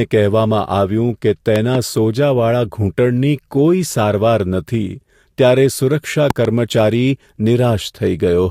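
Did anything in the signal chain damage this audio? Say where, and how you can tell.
Yes. Loud pops come as double thumps at 1.56–1.77 s and 6.30–6.47 s, about 10 and 15 dB above the speech. These are likely voltage steps from wiring, static or a driver glitch.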